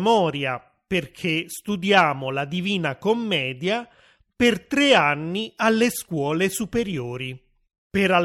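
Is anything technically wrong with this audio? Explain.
No, nothing in this speech recording registers as a technical fault.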